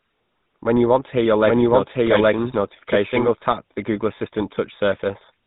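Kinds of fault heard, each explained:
GSM full-rate codec: The whole recording is squeezed through the old GSM coder, which models the vocal tract and drives it with a pulse excitation. Here that yields a buzzy, gravelly speech quality, clearly audible. A spectrogram shows nothing above 4 kHz, consistent with roughly 13 kbps coding.
Doubled audio track: From 1.44 s, after "want to hear your", a second full-band copy of the speech runs about 0.7 s behind at roughly equal level, until 3.28 s before "tap the". It is likely a second capture path. The waveform shows repeated envelopes and abrupt onset and offset.
Lost GSM frames: At 4.18 s one 20 ms frame was lost. The decoder repeated the previous frame's settings, giving a brief rough, metallic blip. A spectrogram shows a short frozen stripe where the formants briefly stop moving.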